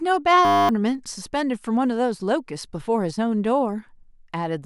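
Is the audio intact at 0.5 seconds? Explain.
No. From 0.45 to 0.69 s the speech gives way to a steady, flat buzz at 100 Hz, a tiny fragment of sound repeating 24 times in a row. This is a system hang loop: the computer or driver stalled while the audio hardware kept replaying the same 10 ms stretch of its ring buffer, which points to a very short buffer. Meanwhile about a fifth of a second of the real speech never arrived.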